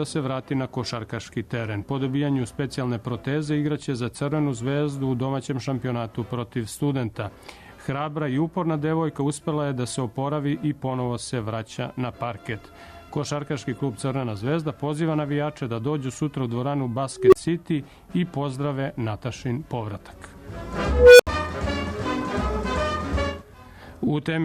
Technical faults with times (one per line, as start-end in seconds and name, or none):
17.16-17.35 unstable filter
20.89-21.27 unstable filter